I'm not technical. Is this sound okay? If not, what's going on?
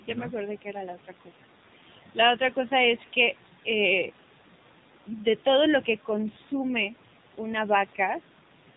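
No. The whole clip has been squeezed through the AMR narrowband mobile codec, an old phone-call format, so the high end is gone and the speech sounds buzzy and synthetic. Between 0.95 and 1.4 seconds, the noise suppressor mistook some of the speech for background noise and turned it down, leaving roughly a sixth of a second sounding faint or swallowed.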